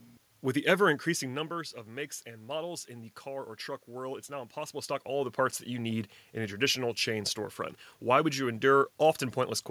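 No technical faults can be heard in the signal chain; the background noise belongs to the room itself, and the level changes around 1 s and again around 4.5 s come from the talker moving relative to the microphone.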